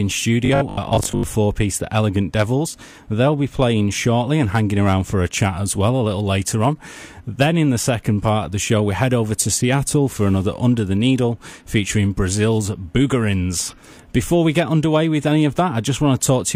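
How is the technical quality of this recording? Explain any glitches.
There's one glitch worth flagging. From 0.45 to 1.23 s you get robotic sound from repeated short buffers: a rigid, metallic 50 Hz buzz. Audio was likely arriving too slowly, so about half the stretch is a looped 20 ms slice while the real material gets skipped.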